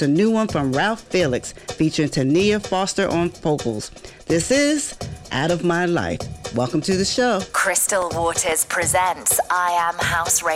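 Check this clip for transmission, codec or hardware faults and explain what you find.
One fault turns up, a processor overload crackle from 8.02 to 8.52 s. The machine missed a handful of deadlines on very short buffers, under a millisecond each, and repeated stale audio with hard edges each time. You hear a brief gritty tearing over the sound, then it clears.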